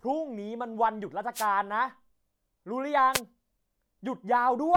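At 1.34 s the speech is interrupted by a wireless microphone noise hit lasting about 0.13 s. A second one follows at 3.13 s, shorter at about 0.08 s. Both come from the analogue FM radio link dropping out briefly. Reflected signals cancel the direct one at the receiver. With the signal gone, receiver noise surges up over the speech. Each hit sounds like a quick swish of static.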